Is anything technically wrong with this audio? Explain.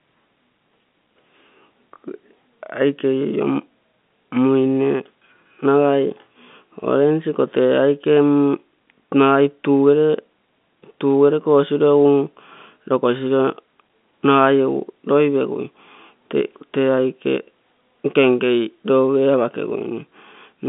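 No, nothing is technically wrong with this audio.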